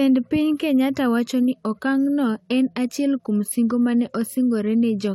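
At 1.54 s, just after "wacho ni", the speech drops abruptly to an adaptive stream at a lower bitrate and stays there to the end of the clip. The player switched renditions mid-stream, with no gap at the join. The treble turns synthetic, nothing is left above 16.3 kHz, and codec artefacts rise. The character fits a move from roughly 96 kbit/s AAC-LC to 32 kbit/s HE-AAC.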